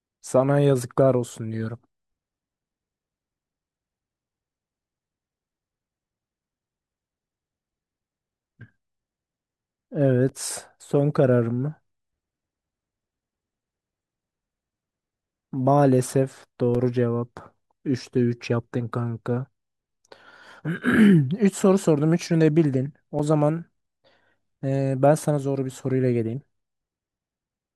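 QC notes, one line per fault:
10.29 s, 16.75 s, 23.19 s: block of digital silence. Each is a 5.33 ms silent gap, which fits a 256-sample buffer left unfilled, heard as a sharp tick. The waveform drops flat to near silence and back with no fade, and the spectrogram shows a thin vertical broadband line at each edge.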